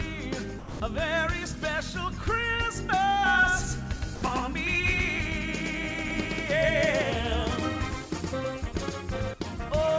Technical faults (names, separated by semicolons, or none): sound dropped by the voice detector; doubled audio track